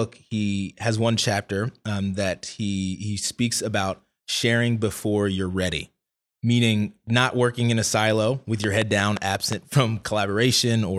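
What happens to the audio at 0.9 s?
Nothing goes wrong at 0.9 s; the speech plays through that moment intact, with no dropout, click or distortion.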